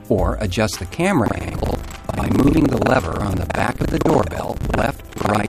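From 1.24 s to the end, buffer tearing causes a 23.4 Hz rattle, consistent with 2048-sample buffers; most of each period repeats audio about 0.1 s old, giving evenly spaced vertical seams on a spectrogram.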